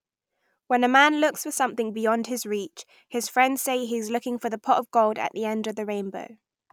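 No technical faults are audible.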